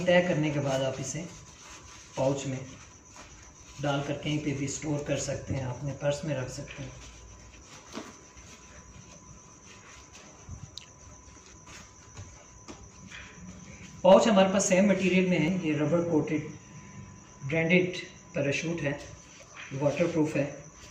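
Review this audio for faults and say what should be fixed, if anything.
Three abrupt skips occur at 3.63 s, 15.48 s and 19.43 s, each removing around 50 ms of sound with the two sides butted together and no silent gap. This is likely audio missing between chunks, lost while a recorder or processor working in 4-second blocks closes one block and opens the next. Unlike a dropout, nothing goes quiet; the sound simply jumps forward. Fix it by overlapping or double-buffering chunks so capture continues across each handover.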